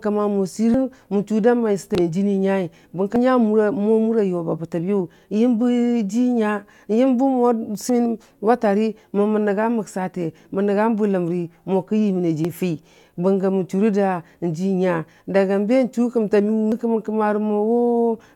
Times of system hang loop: none

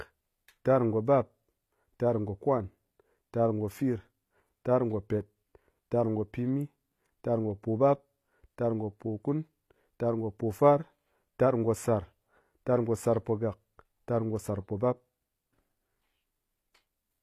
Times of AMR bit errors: none

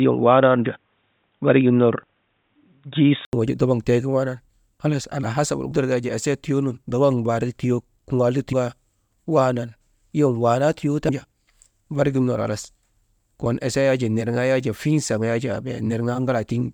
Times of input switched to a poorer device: 0.00-3.33

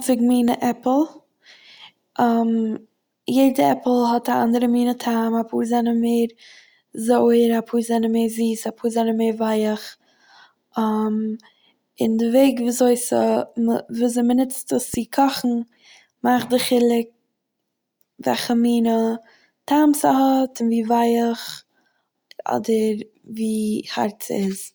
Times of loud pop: 0.48-0.50, 14.94-14.96

